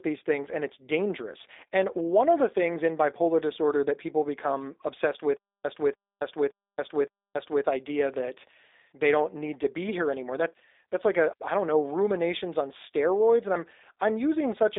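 From start to finish the speech carries the sound of the G.729 codec, and the damage is plainly audible. Nothing survives above 3.7 kHz or below about 300 Hz, yet unlike a simple telephone-band filter the voice itself is remade: a vocal tract filter and pitch predictor drive a few pulses per frame, leaving a rough, buzzy, synthetic edge, which fits an 8 kbit/s rate rather than mere bandwidth loss.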